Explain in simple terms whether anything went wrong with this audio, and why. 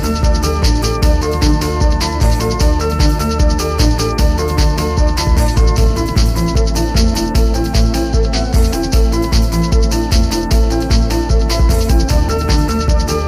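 Nothing went wrong here; there's nothing in it that points to a problem anywhere along the way.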